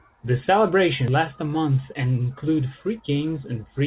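At 1.08 s, just before "last a", there is a skip ahead: roughly 0.3 s of speech never reaches the ear, dropped in transit or discarded when the receiving buffer overflowed while later audio was already queued. Playback leaps forward with no silence inserted, so the sound on either side is butted together and the phrase lurches. On a waveform the envelope changes abruptly at a single point with no dip between. On a spectrogram the harmonic pattern jumps discontinuously at one vertical edge.

From 1.69 to 2.04 s, after "last a", a jitter buffer speed-up follows. The receiver was holding more audio than its target delay and trimmed it back by cutting out short pitch-period-sized pieces many times in a row, removing around 40 ms in total. The speech plays at about 109% speed with unchanged pitch and sounds rushed. A spectrogram shows compressed syllable durations but harmonics at their normal spacing, and a waveform shows tightly packed periods with tiny splice points. 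Throughout, the spectrogram is empty above 4 kHz, which points to a narrowband G.711 mu-law call path.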